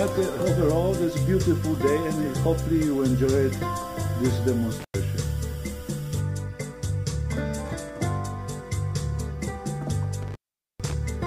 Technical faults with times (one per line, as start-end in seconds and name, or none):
4.80-4.94 intermittent contact
10.22-10.93 intermittent contact